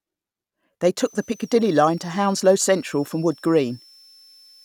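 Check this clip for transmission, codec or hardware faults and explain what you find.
One hardware fault is present, a switching supply whistle running from 0.98 s to the end of the speech clip. A switching power supply is cycling at an audible rate, either from light-load burst operation or from beating against a second converter, and that ripple reaches the audio path. It sounds like a thin high whistle, sitting about 30 dB below the speech and wandering between 5.28 and 6.14 kHz as the supply's load shifts.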